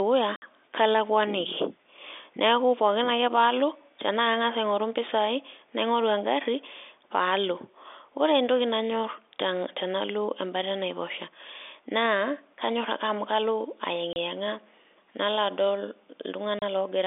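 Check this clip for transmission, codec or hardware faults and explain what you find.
The speech is interrupted three times by packet loss filled with silence, heard over telephone-band G.711 coding. The gaps run from 0.36 to 0.42 s (60 ms), 14.13 to 14.16 s (30 ms), and 16.59 to 16.62 s (30 ms). When audio packets fail to arrive, the receiver plays nothing in their place, so the sound cuts abruptly to dead silence with hard edges. The 30 ms steps fit a 30 ms packet, with the first gap equal to two in a row. Concealment would instead smear or repeat sound across the hole.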